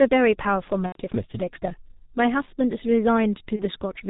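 A speech clip carried throughout by the G.723.1 codec, whose heavy damage fits the low 6.3 kbit/s mode. Its 30 ms frames and slowly updated voice model, together with passing nothing above 4 kHz, leave the speech muffled and hoarse with smeared consonants. VoIP packet loss concealed by the speech codec occurs from 0.86 to 0.99 s, a gap that points to three consecutive 30 ms frames going missing, and from 3.56 to 3.64 s, which fits a single lost frame. In each gap the decoder keeps repeating its last pitch and filter at falling gain, so the speech stretches into a fading buzzy tone or coloured noise and stays weak for a moment after real packets resume.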